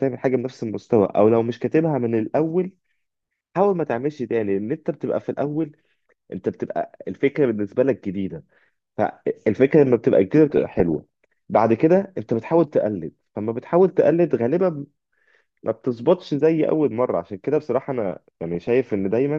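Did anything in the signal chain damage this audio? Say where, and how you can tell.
Yes. The damage happened in digital radio reception, in the DAB decoder, as DAB burbling. Two bursts stand out in the speech, from 10.50 to 11.04 s and from 18.12 to 18.68 s. The first hit 28 frames and the second 25. Reception was weak there, with bit errors under one percent. Some got past the error correction into the MP2 data. Corrupt samples put short blips of noise in single sub-bands.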